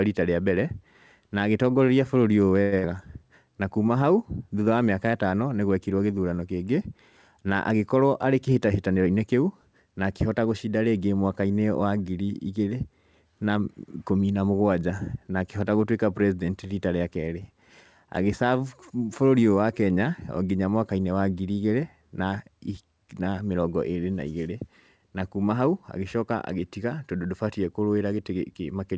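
A call audio freeze from 2.62 to 2.74 s interrupts this speech recording, which has passed through a call path whose band ends at 8 kHz, consistent with G.722. For about 100 ms the last sound is stretched into a fading buzz or hiss, then the speech carries on from exactly where it stopped, so nothing is lost but a gap is inserted. The likely cause is packets stalling in transit until the jitter buffer ran dry, adding about 100 ms of delay. Right after, a burst of packet loss from 2.78 to 2.85 s follows a different pattern. About 55 ms of concealment continues the previous sound while turning it down, and the speech resumes further along, so about 60 ms of the original audio is missing. This happens when several consecutive packets never arrive or arrive too late to be played. Finally, a jitter buffer speed-up between 8.01 and 9.07 s makes the speech run about 8% fast at unchanged pitch, so that stretch sounds hurried. 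The buffer had built up more audio than its target, and the receiver trimmed away short pitch-period-sized slices in quick succession, removing roughly a tenth of a second in total to bring the delay back down.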